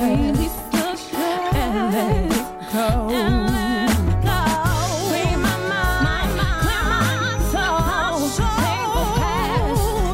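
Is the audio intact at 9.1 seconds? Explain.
No. From 5.74 to 9.46 s a thin, steady 6 kHz feedback whistle sits some 25 dB below the sound, swelling and fading slowly, likely from a speaker-to-microphone loop held just at the edge of feedback. Unlike a runaway howl, it never builds into a howl.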